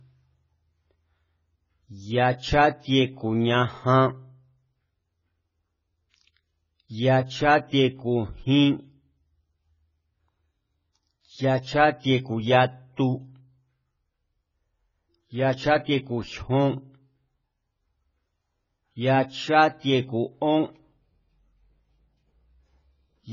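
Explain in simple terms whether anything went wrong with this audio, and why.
AAC compression damage runs through the whole recording. Nothing is heard above 7 kHz, so the speech sounds dull and muffled, and sibilants take on a smeared, fizzy, warbling texture. The likely cause is heavy data reduction that threw away fine detail to save space.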